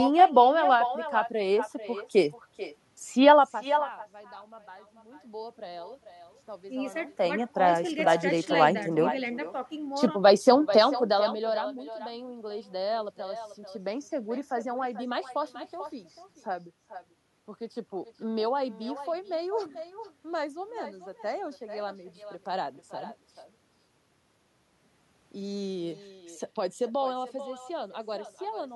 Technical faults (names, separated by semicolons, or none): echo with no canceller